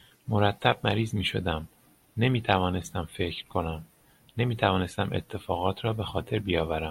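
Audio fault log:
0.26–6.59 s, clock slip clicks: faint ticks recur at a steady interval of roughly 0.4 s, around fifteen in all. Each is a single-sample jump, likely from two unsynchronised clocks drifting about 50 ppm apart. The regular spacing and tiny size distinguish them from random buffer dropouts.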